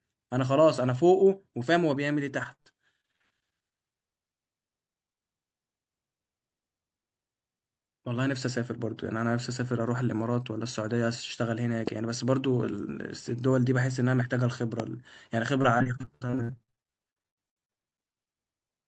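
Speech carried over a call link, band-limited at about 8 kHz in a way that fits Opus, shows repeated packet loss (robotic sound) from 2.43 to 3.26 s (ten gaps, longest 58 ms) and from 15.62 to 18.11 s (32 gaps, up to 73 ms). About a third of each span is concealed by extending the last sound, so it sounds choppy rather than cutting to silence. Two loud pops, at 11.87–11.90 s and 14.80–14.82 s, stand roughly 10 dB above the speech, likely from an electrical step such as a switch or static discharge. Each is a single sharp transient with the speech continuing underneath, not a gap or a smeared patch.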